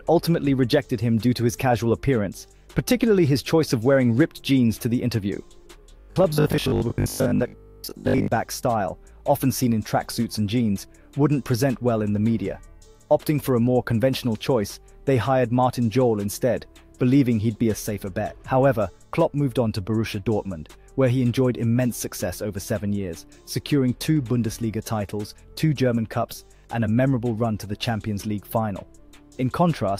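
From 6.0 to 8.28 s the sound goes robotic, a rigid metallic buzz at 50 Hz, with most of it replaced by repeats. That's likely robotic sound from repeated short buffers: a roughly 20 ms chunk looping while fresh audio gets skipped.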